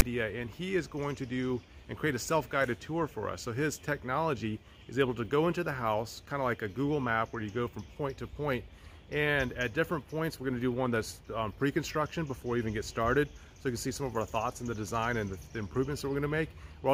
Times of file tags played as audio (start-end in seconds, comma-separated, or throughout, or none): 0.00